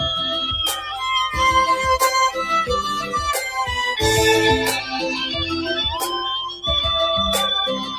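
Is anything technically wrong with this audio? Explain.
Yes. A noise suppressor meant for speech was left running on this sound throughout. It treats sustained and ambient content as noise and repeatedly turns it down, so the level pumps by roughly 5 dB. On a spectrogram, sustained bands and decay tails look patchy and fade early, while onsets stay bright.

The suppressor also cut the sound harder at two points. From 0.75 to 1.0 s it dips by about 6 dB, and from 6.49 to 6.64 s by about 12 dB, quieting it. The waveform envelope shows matching notches there.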